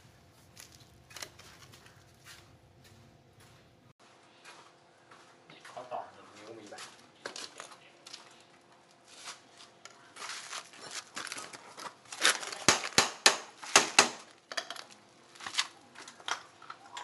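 At 3.92 s the input likely switched to a poorer device: an 80 ms gap, then nothing above 11.4 kHz, plus a new low noise floor.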